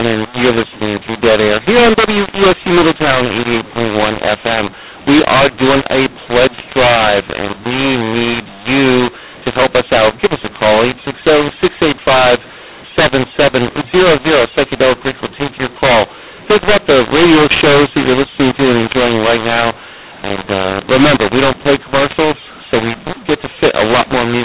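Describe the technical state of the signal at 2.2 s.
At 2.2 s you're hearing the mu-law and A-law mix-up, which runs through the whole clip: speech coded with A-law is being decoded as mu-law, so sample levels land in the wrong places. It sounds harsh and gritty, with pauses filling up with noise, all inside the normal 4 kHz telephone band.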